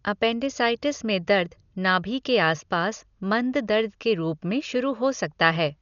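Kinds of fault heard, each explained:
Dolby Digital compression: likely a low-bitrate AC-3 encode, which fits roughly 48 kbps. Nothing above 7 kHz gives dull speech with rough, fluttering dither noise; spectrograms show a hard ceiling and speckled bands.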